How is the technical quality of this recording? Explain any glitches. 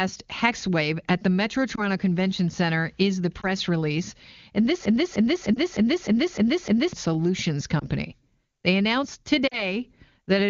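The recording has two kinds of glitch: several short dropouts from lost AMR speech frames, and one long broken-record loop. The wideband speech itself sounds clean, as you would expect from AMR-WB at a high wideband rate.

Lost AMR speech frames occur at 1.76–1.83 s, 3.41–3.47 s (just after "is the"), 5.54–5.59 s, 7.80–7.86 s and 9.47–9.77 s. Radio errors corrupted a frame, so the decoder discarded it and rebuilt the gap from the last good pitch and vocal-tract settings at reduced gain. Most events cover a single 20 ms frame and are heard as a brief dip or warble. The last covers two frames (40 ms), and there the speech smears and thins before recovering a little rough. On a spectrogram each event shows as a short band of blurred, repeated harmonics with a drop in energy, and the waveform envelope briefly sags.

A broken-record loop runs from 4.85 to 6.93 s. A piece about 0.30 s long repeats exactly seven times back to back, likely because the player, encoder or stream stalled and kept resending the last fragment it held. 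The audio that should have filled those two seconds is lost. On a waveform the loop looks like identical blocks tiled end to end, and a spectrogram shows the same pattern stamped out at a fixed period. The lost frame at 5.54 s falls inside this loop.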